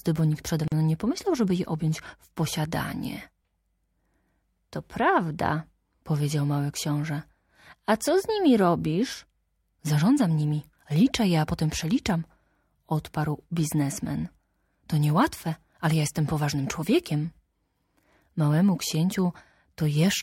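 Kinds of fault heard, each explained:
Gap at a join of encoded pieces, 0.68 to 0.72 s: the speech stops dead for about 41 ms, then resumes exactly where it left off. The gap comes from separately encoded segments being butted together without trimming. Each encoder pass leaves its start-up delay of silence and pads out its final frame, and that leftover silence sits at the seam. The codec softens the abrupt edges on either side of the gap.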